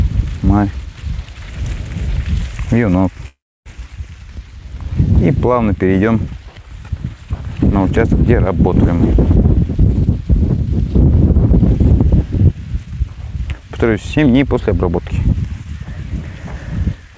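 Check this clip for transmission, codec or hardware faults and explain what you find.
Two transmission faults are present, both tied to packet timing over a call path whose audio stops at 8 kHz, consistent with a G.722 wideband codec.

From 3.28 to 3.68 s there is a call audio freeze. The last sound is carried forward briefly, then gives way to near-silence for about 0.29 s before the audio resumes. The likely cause is delayed packets draining the jitter buffer. The receiver filled the wait with concealment, so roughly 0.38 s of extra time is inserted, but nothing of the original audio is lost. The audio simply continues later than it should.

From 12.52 to 15.19 s there is a jitter buffer speed-up. The buffer was carrying more audio than its target, and the receiver trimmed it down by repeatedly cutting out short pitch-period segments. Across this stretch about a fifth of a second is removed, so the audio plays at around 107% speed with unchanged pitch. 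It sounds slightly rushed, and its natural timing is compressed.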